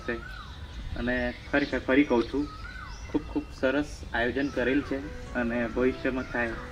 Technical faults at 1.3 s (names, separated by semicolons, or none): none